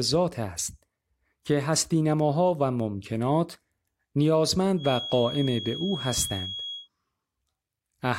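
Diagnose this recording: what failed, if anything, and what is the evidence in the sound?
A thin, steady whistle near 3.3 kHz sits behind the speech from 4.75 to 6.89 s, swelling and fading slowly in level, roughly 10 dB down. It is a feedback whistle, likely from the loudspeaker-to-microphone acoustic loop poised at the edge of instability, so one tone rings without building.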